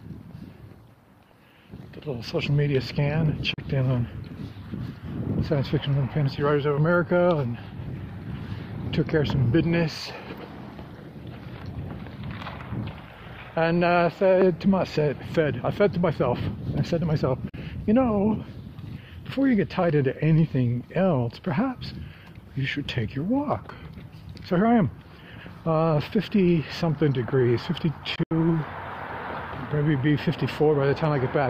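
The sound cuts to silence three times and picks up again as if it had kept playing underneath. The first two gaps, at 3.54 to 3.58 s and 17.49 to 17.54 s, are each about 37 ms of silence, consistent with two lost packets. At 28.16 to 28.31 s the sound stutters, losing about 93 ms in two pieces over 150 ms, the longest about 75 ms. This is likely a Bluetooth dropout: packets arrived too late for the headphones and were discarded.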